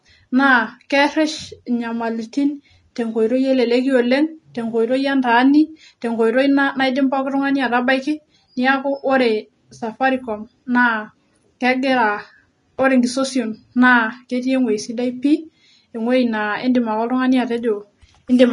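Throughout, the speech stops at 10.6 kHz and its treble turns to grainy hiss, not mere dullness: likely Vorbis compression, fitting about 31 kbps.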